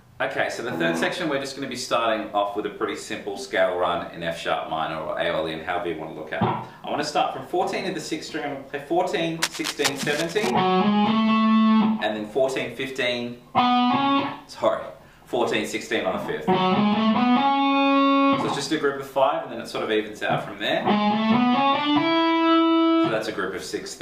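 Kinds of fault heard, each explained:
Cable scratch noise: from about 9.42 to 10.51 s, a little over a second of dense, irregular scratching and rustling sits on top of the sound, only about 5 dB below it. This is likely a worn cable, connector or control being moved, with its contact resistance jumping around quickly. Unlike a clean dropout or a single click, the burst is ragged and continuous while it lasts, then stops.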